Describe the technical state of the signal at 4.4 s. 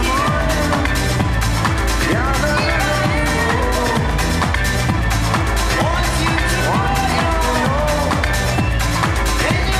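At 4.4 s the signal is intact, with no audible fault at that moment.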